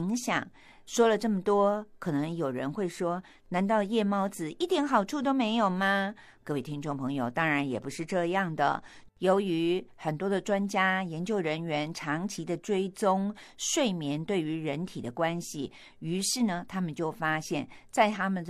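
No technical faults occur at any point in the speech.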